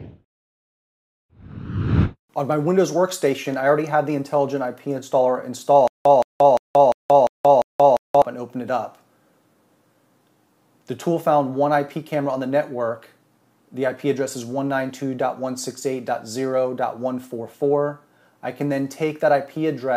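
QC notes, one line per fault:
5.88–8.22 s: stutter with silent gaps. A 171 ms fragment repeats six times at a steady 349 ms period, each followed by about 178 ms of digital silence. This is likely a playback or stream stall replaying its last buffered fragment on each retry, so the intended audio in that span is lost.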